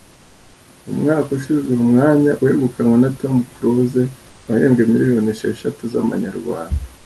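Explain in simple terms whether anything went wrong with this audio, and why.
At 0 to 0.53 s, 4.29 to 4.47 s and from 6.97 s to the end, the pauses get comfort noise in place of the background. It's a flat, featureless hiss instead of the room sound, likely because the call stopped sending during silences and the receiver filled them in.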